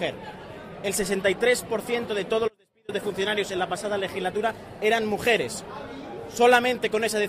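At 2.48 s the sound drops out abruptly for about 0.40 s, to 2.89 s, leaving only a faint residue roughly 35 dB below the signal. This audio dropout likely came from a brief signal loss upstream while the path stayed live; the waveform collapses to a thin band, the spectrogram to a pale gap.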